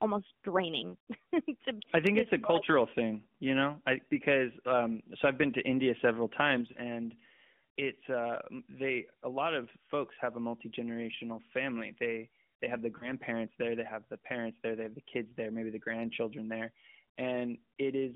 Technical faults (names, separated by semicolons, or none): lost AMR speech frames; one channel drops out